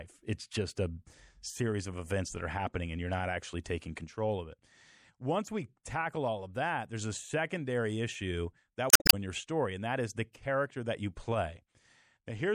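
The whole clip has that watery, swirly quality you get from MP3 compression, and it's plainly audible. The likely cause is a low-bitrate encode, something in the region of 64 kbps. At that rate the encoder chops off the top end and drops the quieter frequency lines, and those lines flicker in and out from frame to frame. That's why the s sounds come out metallic and chirpy, and consonant onsets smear.

Then from about 8.87 to 9.14 s, right after "a secondary issue that", there's a burst of damaged data in the compressed stream. A chunk of the file was corrupted, so the decoder misread those frames, lost sync and had to hunt for the next valid frame header. You hear a short glitch, and the audio picks up again at "your story and that".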